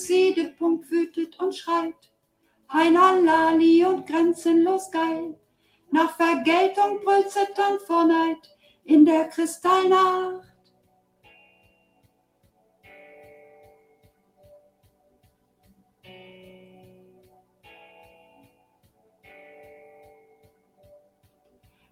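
A noise suppressor built for speech was left running on this material throughout. It treats sustained and ambient content as noise, so level swings by around 15 dB as it engages and releases, producing a pumping, fluttering quality while sharp onsets pass largely intact.

The suppressor turned sound down at 1.93–2.69 s, 5.34–5.92 s, 8.37–8.88 s, 10.42–12.86 s, 13.46–16.05 s, 16.93–17.66 s, 18.09–19.26 s and 20.08 s to the end. Held and decaying portions drop by about 14 dB (about 13 dB at 16.93 s), so tails collapse early and the sound thins.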